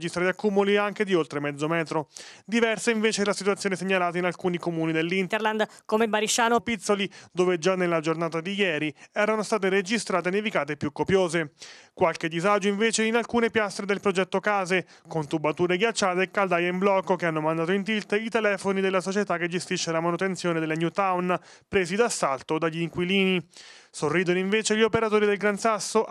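A section at the wrong speed runs from 5.29 to 6.59 s, about 1.3 s of audio played 1.25 times faster than the surrounding material. Because speed and pitch move together, that stretch jumps up by roughly four semitones and sounds hurried and bright, then drops back to normal at 6.59 s. The likely cause is that this segment was played or rendered against the wrong clock rate, so its samples went by too quickly.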